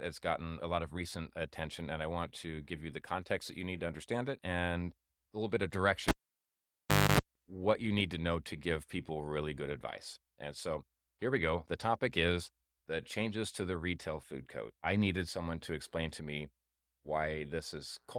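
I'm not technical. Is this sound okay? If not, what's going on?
No. Someone pulled a live cable out and plugged it back in, so the sound cuts out after "a little bit of" at 6.08 s. You hear a pop, about a second of near silence, a short burst of low 50 Hz mains buzz, and another pop before "what you need to" returns at 7.20 s.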